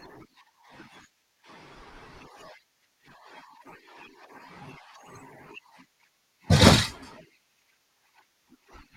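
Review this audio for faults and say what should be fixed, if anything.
From 0 to 2.0 s the speech sounds dull and swirly, with thin or synthetic treble, then brightens abruptly with no gap. This is an adaptive stream starting at a low bitrate: the player opened on a lean version, which fits HE-AAC at 32 kbit/s, then switched to one that fits AAC-LC at 96 kbit/s once it had measured the connection. To prevent it, start playback on a higher-bitrate rendition, or buffer briefly before playing.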